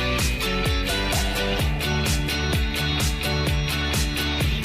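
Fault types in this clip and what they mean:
No faults detected; nothing in the signal calls for correction.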